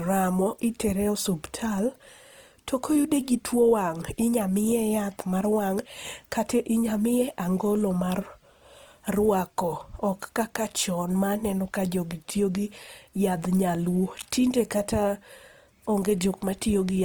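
Throughout the speech, a low-rate encoder, likely Opus compression in its CELT music mode, has rebuilt starved bands with folded or noise-filled content, which fits a rate near 24 kbps. The voice sounds plainly grainy and rough, though content still reaches about 20.2 kHz.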